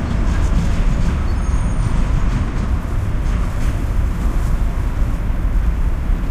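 At 3.80 s, crude rate conversion sets in and lasts to the end. The sample rate was raised with no filtering. Existing samples were simply repeated to fill the gaps, which fits a change from 32 kHz up to 44.1 kHz. The repeats fall in an uneven but cycling pattern. That pattern adds shifted, inharmonic copies of the sound itself. They sit around 40 dB below the signal. The result is a faint, gritty fizz riding on the louder and brighter moments.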